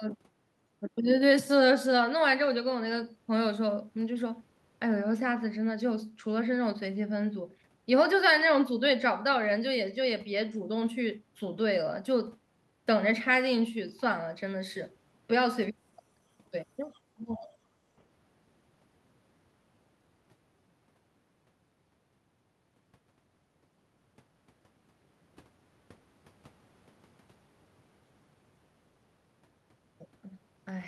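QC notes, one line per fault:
16.94–17.00 s, other side's voice leaking through: a brief, very faint scrap of a second voice surfaces underneath the talker, far below the main speech and gone within a fraction of a second. The likely cause is the far end's audio playing from the talker's loudspeaker, reaching the microphone, and not being fully cancelled, so a small residue slips out.
17.16–17.52 s, speech suppressed in double talk: the talker's own voice sinks, dropping by roughly 20 dB at its deepest, and sounds ducked and pulled away for a little under half a second before recovering. Coming straight after the leaked scrap, this points to both sides speaking at once. The echo canceller likely could not separate the talker from the loudspeaker echo and attenuated everything together, taking the wanted speech down with the echo.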